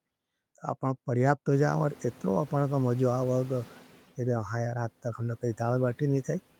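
Just after "तो अपनें परियाबत हो", from 1.52 s to 3.93 s, the room noise, which jumps by about 25 dB near 1.5 s, comes through with less reduction at first, then sinks by about 6 dB. This is the noise suppressor catching up: its noise estimate needed 2.4 s to adapt.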